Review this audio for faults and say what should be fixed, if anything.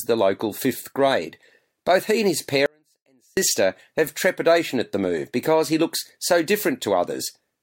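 An audio dropout to a faint residue runs from 2.66 s to 3.37 s, right after "he and his" and before "have trepidation at the". For about 0.71 s the speech cuts out abruptly, leaving only a faint residue roughly 40 dB below normal, likely a momentary signal break with the downstream path still live. The hard edges and lingering residue separate it from a natural pause or fade. Securing connections and monitoring input continuity would prevent it.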